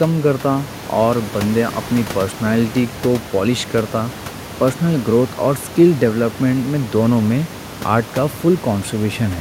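Nothing stood out on listening to this speech recording, and the only other sound is the room's own background noise, sitting about 15 dB below the speech.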